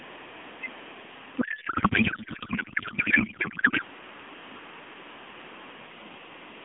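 Speech heard through a band-limited AMR narrowband mobile codec path breaks up from 1.42 to 3.82 s with a codec payload misread. Octet-aligned AMR frames are being unpacked as bandwidth-efficient, so the decoder reads fields from the wrong bit positions. The result is garbled, warbling noise that barely tracks the talker. On a spectrogram, harmonic structure gives way to smeared, disordered energy below 4 kHz.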